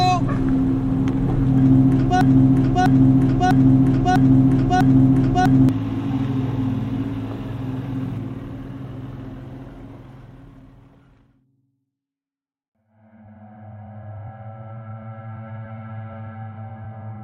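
From 2.21 s to 5.69 s you get a broken-record loop: a 0.65 s fragment repeats five times back to back, identical each pass. Likely the player or stream stalled and kept resending its last chunk, so whatever belonged in that stretch is gone.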